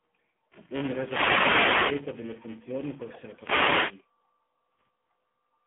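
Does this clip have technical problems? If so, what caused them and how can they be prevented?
Yes. A steady robotic buzz at 345 Hz runs under the speech throughout. This is buffer tearing: writer and reader of the audio ring buffer have slipped, so a small slice of each buffer replays audio a few milliseconds old, with hard joins each time. The rate fits a 128-sample buffer. Keep the write pointer safely ahead of playback by using larger buffers and correct underrun recovery.

The whole clip carries heavy AMR narrowband mobile codec damage at 6.7 kbps. The sound is confined to a line band of 150 Hz to 3.5 kHz, with nothing above 3.6 kHz, and the low bitrate makes the speech buzzy and synthetic. Avoid this by using a wideband codec or a higher AMR mode.

Two wireless microphone noise hits appear as bursts of static swish: 0.95 to 2.09 s, just before "delle funzioni può", and 3.28 to 4.07 s, just after it. 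The FM radio signal faded as reflections cancelled, letting receiver noise swamp the audio. Diversity receivers and good antenna placement prevent these dropouts.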